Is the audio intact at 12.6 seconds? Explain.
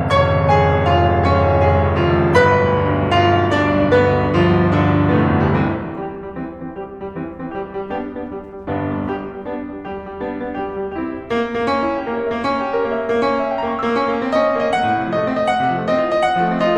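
Yes, the music is intact at 12.6 seconds, with no dropout, glitch or distortion at that moment.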